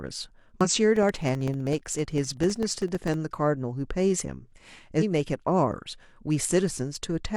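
Damaged data in a compressed stream breaks into this speech recording at 0.61 to 0.68 s and again at 4.97 to 5.03 s, where the decoder misreads corrupt frames, loses sync and resyncs at the next frame header. Periodic USB or driver dropouts run from 0.96 to 3.14 s, with about a millisecond blanked to silence every 64 ms, giving roughly forty evenly spaced ticks as the bus or driver stalls.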